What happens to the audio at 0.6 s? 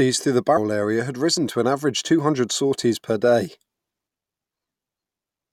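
At 0.56 to 0.58 s the speech jumps forward. These are compressed frames skipped, roughly 300 ms lost, consistent with about ten 23.2 ms frames.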